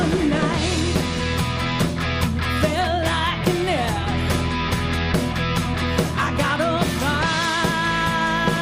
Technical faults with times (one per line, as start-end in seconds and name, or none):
none